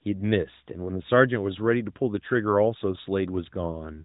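Nothing stood out on listening to this speech clip, with no fault to report at any point.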